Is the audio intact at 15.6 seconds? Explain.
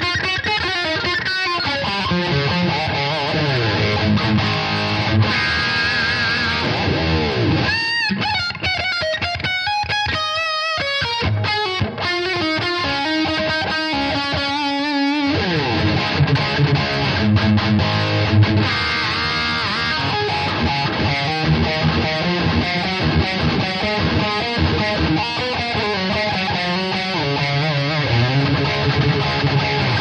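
Yes, at 15.6 seconds the audio is intact, with no dropout, click, distortion or other fault at that moment.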